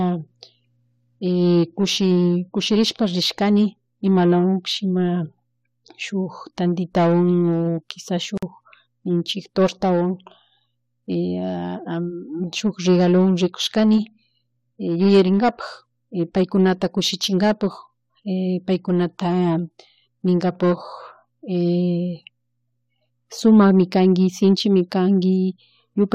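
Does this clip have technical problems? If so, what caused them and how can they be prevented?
Yes. A gap at a join of encoded pieces drops about 50 ms of silence into the speech at 8.38 s, from separately encoded segments joined untrimmed. Trim encoder delay and padding before joining.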